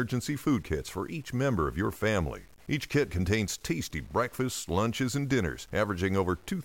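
A speech recording carries a grainy, gritty distortion from start to finish that rides along with the voice, coarsest in the quiet tails. The likely cause is low bit depth without dither, which fits truncation to an 8-bit word length, leaving error roughly 35 dB below the signal.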